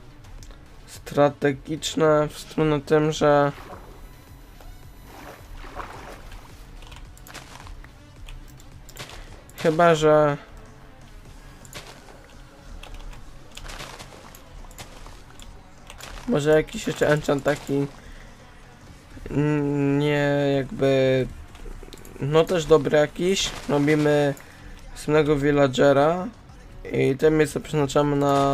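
From 3.54 to 5.54 s there's USB whine, a fixed 1 kHz tone with harmonics strongest around 20 kHz, roughly 35 dB down, from the bus's 1 ms frame current leaking in.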